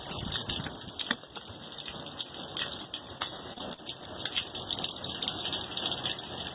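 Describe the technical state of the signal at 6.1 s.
At 6.1 s the signal is intact, with no dropout, glitch or distortion, and the band-limiting to nothing above 4 kHz that runs through the call path points to a telephone-band codec such as G.711 mu-law.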